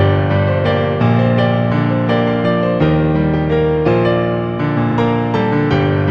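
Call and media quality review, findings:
Repeated frames at 4.91–4.95 s: brief stutter, a 40 ms block played once more. Probable component: encoder output or transport writing the same compressed frames twice, fitting two frames resent. Adds 40 ms to playback.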